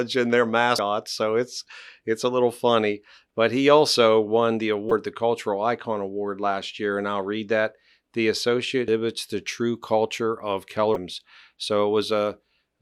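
At 0.78 s, just after "and their", the speech is broken by a short blip caused by damaged data in a compressed stream. The same fault returns from 4.88 to 4.92 s after "he also won the", at 8.88 s, and from 10.93 to 10.96 s after "the true culture of". In each case corrupted bytes make the decoder misread the affected frames and lose sync. Each event is a brief chirp, squawk, click or short hole as the decoder resynchronises on a later frame.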